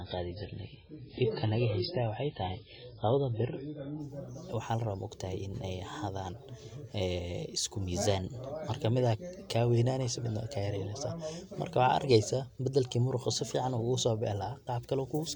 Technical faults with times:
0.00-4.00 adaptive stream starting at a low bitrate

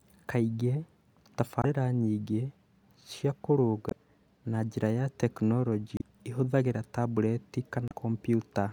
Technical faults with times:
1.61-1.65 damaged data in a compressed stream
3.88-3.93 damaged data in a compressed stream
5.97-6.02 damaged data in a compressed stream
7.88-7.92 damaged data in a compressed stream

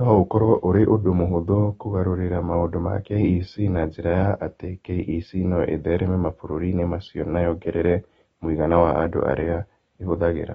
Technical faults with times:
0.00-10.54 AAC compression

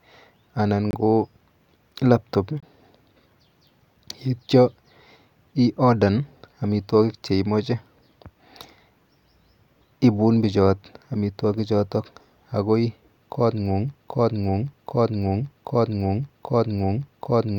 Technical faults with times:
0.91-0.94 corrupt frame muted
2.60-2.63 corrupt frame muted
13.95-17.58 broken-record loop

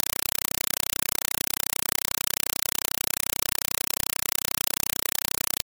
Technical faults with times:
0.00-5.65 compressed stream played as audio

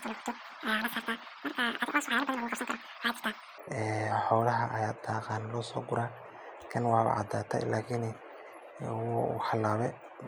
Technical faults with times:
0.00-3.58 audio read two samples at a time (double speed)

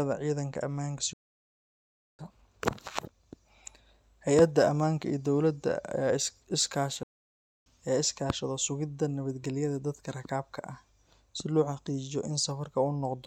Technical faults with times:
1.13-2.19 playback stall
7.03-7.66 playback stall

